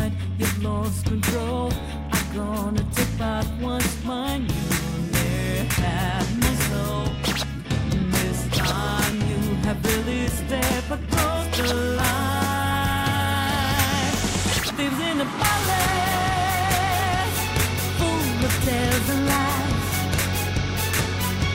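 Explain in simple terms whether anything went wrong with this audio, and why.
Nothing went wrong here: listening through the whole recording, there's no glitch, dropout or odd artefact to point to, so there's nothing to explain.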